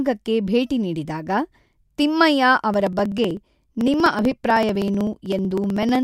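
From 2.74 s to 5.95 s the speech carries periodic USB or driver dropouts. Something blocks the audio path every 63 ms, about sixteen times a second. Each time, roughly a millisecond of audio is skipped outright rather than filled with silence. Around fifty of these tiny gaps land in that stretch. They come through as an even train of ticks. The ticks sound only while the speaker is producing sound.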